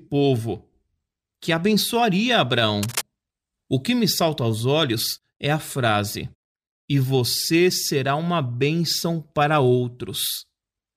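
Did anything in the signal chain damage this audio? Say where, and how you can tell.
Yes. Just after "que abençoaria", rough scratching nearly as loud as the speech fills 2.83 to 3.02 s. This is cable scratch noise in the analogue wiring, likely from a worn connector whose contact resistance fluctuated.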